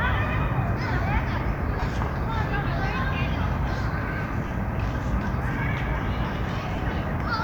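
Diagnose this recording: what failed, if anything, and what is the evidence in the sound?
Noisy smears at 1.80–1.82, 4.47–4.51 and 6.75–6.78 s point to lost LE Audio frames, which the LC3 decoder filled by reusing the last spectrum with random signs.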